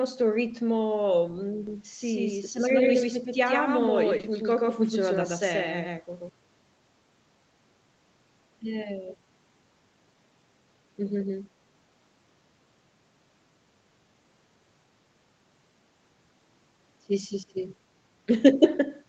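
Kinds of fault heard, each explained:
Doubled audio track: From 1.67 to 6.29 s a second full-band copy of the speech runs about 150 ms behind the original at roughly the same level, giving a hard slapback echo with no decay or room colour. It appears and disappears abruptly at those two points rather than fading. The likely cause is the signal being picked up a second time through a slower route, or an edit leaving two out-of-step copies layered together.
Short concealed packet loss: Around 1.95 to 1.99 s, and again from 4.17 to 4.25 s, pieces of the call arrived too late to decode. The first gap is 20 ms. The second is two back-to-back 20 ms gaps, so it lasts longer. The receiver patched each hole by extending the preceding sound, continuing its pitch where the speech was voiced and using shaped noise where it was not. It then crossfaded back to the real signal, leaving a brief smear or wobble.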